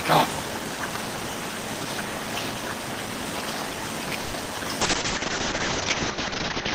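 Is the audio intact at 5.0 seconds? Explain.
No. At 5.0 seconds two faults overlap. The first is a block size mismatch (padded) that runs through the whole clip. Each block arrives shorter than the next stage expects, and the remainder is filled with silence. Those regular gaps produce a buzz at about 91.9 Hz and stretch the audio to 0.919 times its normal speed, while the pitch stays roughly where it should be. That steady pitch separates it from a sample-rate mismatch, which would slow the audio and lower the pitch together.

The second is a call bitrate drop that begins at 4.83 s and lasts to the end. The encoder's rate falls from 32 kbps to 7 kbps and sits at that floor for about 1.9 s. At that rate the coding turns coarse and the bandwidth narrows from 20 kHz to 8 kHz, so the audio sounds rough, watery or muffled at 5.0 s. This is not packet loss, which would leave brief dropouts or smeared repeats. 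Here the degradation is continuous and the top end stays cut off.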